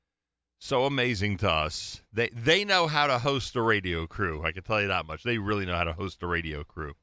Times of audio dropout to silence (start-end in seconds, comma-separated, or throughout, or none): none